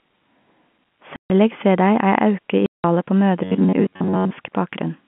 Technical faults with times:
1.16-1.30 packet loss filled with silence
2.66-2.84 packet loss filled with silence
3.44-4.31 robotic sound from repeated short buffers

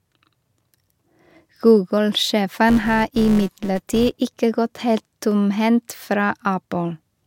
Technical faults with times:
2.69-4.18 filter restarted on every block

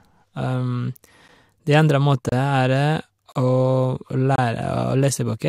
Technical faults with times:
1.28 gap between stream segments
2.29-2.32 gap between stream segments
3.32-3.35 gap between stream segments
4.36-4.38 gap between stream segments

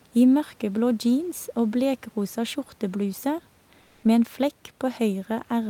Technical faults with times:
3.85-4.03 comfort noise in place of the background

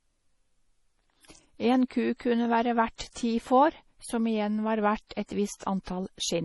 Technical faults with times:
0.00-6.45 MP3 compression
2.96-3.00 pre-echo
5.07-5.11 pre-echo

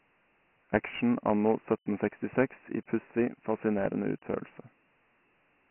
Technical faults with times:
0.00-5.70 Dialogic VOX ADPCM

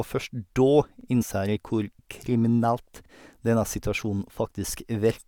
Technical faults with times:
1.01-1.06 overlapping chunks
1.21-1.23 damaged data in a compressed stream
3.06-3.10 overlapping chunks

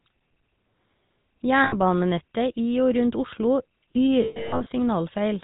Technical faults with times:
0.00-5.43 GSM full-rate codec
1.64-1.75 lost GSM frames
4.22-4.67 lost GSM frames

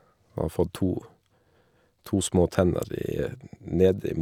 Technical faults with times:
none

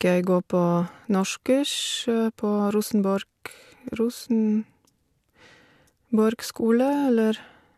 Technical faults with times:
none

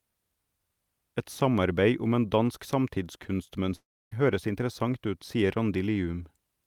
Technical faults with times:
3.75-4.13 long network dropout

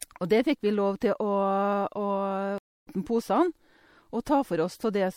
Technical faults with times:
0.00-5.16 MP3 compression
2.58-2.88 stream reconnect

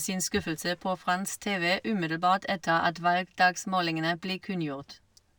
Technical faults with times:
0.00-5.39 imaging from linear upsampling

